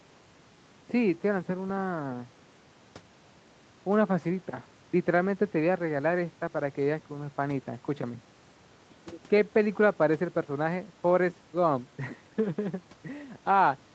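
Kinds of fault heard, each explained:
No faults heard; the speech shows only the normal call-path character, with its content stopping at 8 kHz.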